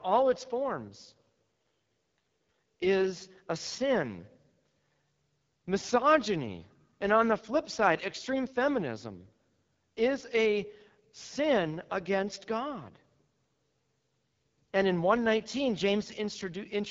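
From the start of the speech right through to the end, there's AMR wideband (HD Voice) codec damage, and it's plainly audible. The vocal-tract model is starved of bits, so the speech turns rough and raspy, with a noise-filled top near 7 kHz, which fits AMR-WB's 8.85 kbit/s mode.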